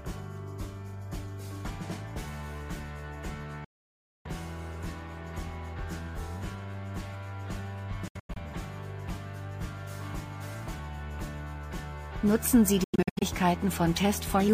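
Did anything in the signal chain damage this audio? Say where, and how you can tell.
Yes. The audio breaks up three times in a way that points to the playback link, most likely a Bluetooth dropout. From 3.64 to 4.27 s there is a single hole of about 0.6 s. From 8.08 to 8.37 s and from 12.84 to 13.23 s the gaps come in short bursts, the longest about 93 ms. Each gap cuts out and back in within a few milliseconds, and the sound comes back further along, as if it had kept playing, because packets that missed their deadline were thrown away rather than delayed.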